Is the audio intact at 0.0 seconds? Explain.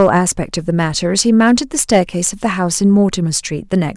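No. Hard clipping runs from the start to 0.28 s: speech driven about 4 dB past full scale has its peaks sheared flat, giving crackle on peaks rather than soft clipping's rounded warmth.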